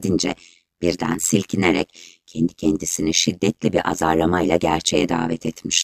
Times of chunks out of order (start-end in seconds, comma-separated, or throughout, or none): none